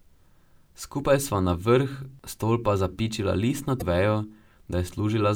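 A speech recording with one fault: damaged data in a compressed stream. It occurs from 3.78 to 3.82 s, lasting about 40 ms. It sounds like a short glitch that breaks into the speech. Some of the encoded bytes there were corrupted. The decoder could not read those frames correctly and lost its place in the stream. It then had to find the next valid frame header. The misread output in between is the glitch you hear.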